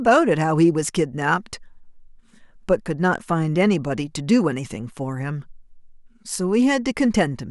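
Nothing in this speech recording stands out as a technical fault, so there's nothing here to flag.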